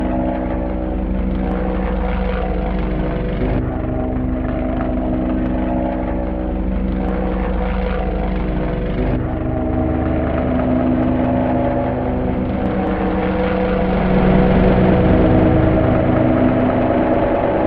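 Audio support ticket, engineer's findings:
Nothing stood out on listening to this recording of sounds.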